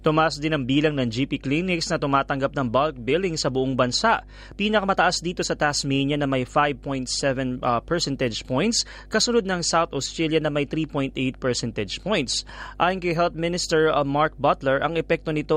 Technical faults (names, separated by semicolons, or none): mains hum